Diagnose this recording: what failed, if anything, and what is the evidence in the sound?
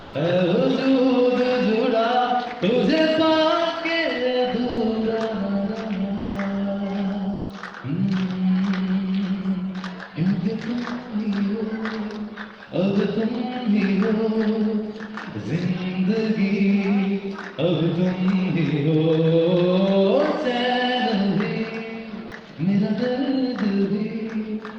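For the first 0.11 s, from 0.00 s, the background, sitting about 22 dB below the loudest parts, is a steady, featureless hiss at the same level as the real background that follows. This is comfort noise in place of the background, from the codec stage, most likely Opus discontinuous transmission: the sender stopped sending during what it judged silence, and the receiver synthesised shaped noise for those 114 ms.

Three short stretches of sound vanish into that same flat noise: 40 ms at 4.71 s, 160 ms from 6.19 to 6.35 s, and 120 ms from 7.35 to 7.47 s. This is sound dropped by the voice detector, again at the codec stage, likely Opus DTX misjudging quiet material as background. Transmission halted, the receiver filled each gap with comfort noise, and the audio returned when the detector triggered again.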